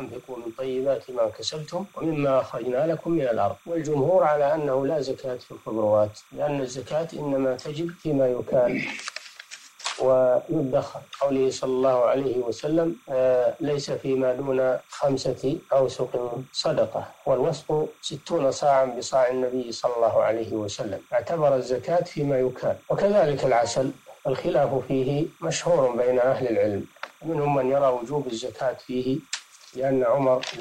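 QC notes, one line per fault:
throughout, timecode bleed: linear timecode from an adjacent track or cable is leaking into the audio path, adding a faint, steady chirping warble roughly 35 dB below the programme. The square-wave code flips between tones near 1 kHz and 2 kHz, and its rhythm fits 30-frame timecode.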